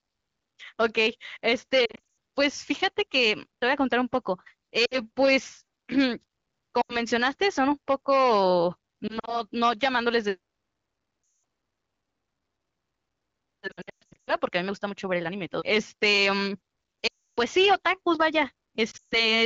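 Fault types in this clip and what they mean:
Lost AMR speech frames: frames corrupted on the radio path fail their checksum, and the wideband decoder repeats the last good pitch and vocal tract settings at falling gain. Eight bursts between 1.85 and 18.91 s smear and fade the speech, the heaviest spanning 13.67 to 14.35 s.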